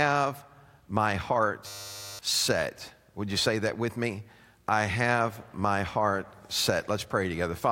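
From 1.67 to 2.19 s the speech gives way to a system hang loop: the system froze while the sound hardware replayed one 10 ms buffer about fifty times, losing roughly half a second. It sounds like a steady 100 Hz buzz; the waveform repeats identical 10 ms cycles, and the spectrogram shows even horizontal lines every 100 Hz.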